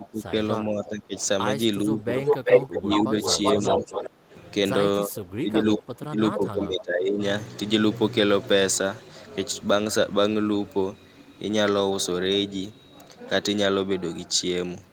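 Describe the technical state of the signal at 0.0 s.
Speech suppressed in double talk runs from 0.0 to 0.32 s. The speech is pushed down in level, at its deepest by roughly 15 dB, for a total of about a fifth of a second within that span, so the opening speech dips. The likely cause is an echo canceller that heard both ends active at once, could not tell the near talker from loudspeaker echo, and attenuated everything.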